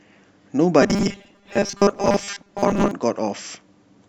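From 0.82 s to 2.91 s the speech turns into robotic sound from repeated short buffers: a rigid, metallic buzz fixed at 200 Hz that still roughly tracks the syllables. The likely cause is audio arriving too seldom, so a 5 ms stretch is looped to fill the gap for most of this span while the real audio is skipped. Unlike ordinary codec warble, the buzz holds one steady pitch whatever the talker's intonation does.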